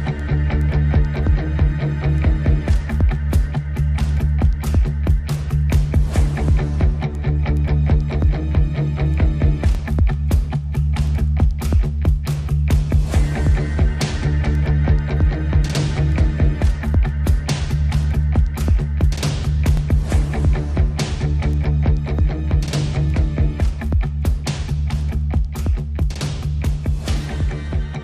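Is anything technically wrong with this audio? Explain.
Yes: overlapping chunks at 9.75 to 9.77 s and 19.77 to 19.80 s. Each 10-second chunk starts about 25 ms before the previous ends, replaying that sliver as a brief stutter.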